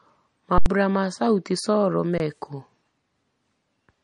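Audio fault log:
Throughout: MP3 compression, likely at a low bitrate near 40 kbps; nothing above 10.6 kHz, and plainly audible watery swirl as weak frequency components flicker between frames.
0.58–0.66 s and 2.18–2.20 s: underrun with held sample; the output buffer ran empty and the waveform froze flat for 80 ms and 20 ms, losing roughly 70 ms and 20 ms of audio.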